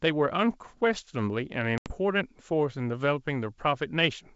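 Packet loss on the ADPCM call, 1.78 to 1.92 s: roughly four packets, about 80 ms of audio, drop to hard-edged silence. The decoder's predictor and step size lose step with the sender's, so speech returns slightly distorted, settling over tens of milliseconds.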